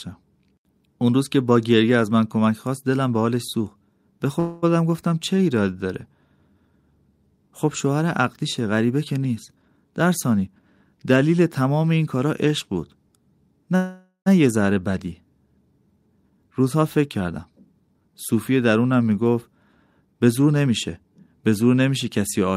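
At 4.39 to 4.64 s the speech stalls into a fading buzz for about 0.25 s, and at 13.76 to 14.28 s a longer fill of about half a second ends in roughly 90 ms of silence. These are call audio freezes, likely from packets held up until the jitter buffer ran dry. Unlike a dropout, nothing is lost: the speech resumes exactly where it stopped, just later.

Between 9.55 and 10.63 s, 16.08 and 18.09 s, and 20.00 and 21.11 s, jitter buffer speed-up trims pitch-period slices to shed backlog. Each stretch removes about a fifth to a third of a second, giving 120%, 113% and 121% speed. The speech sounds hurried, but its pitch stays put, unlike a sample-rate error.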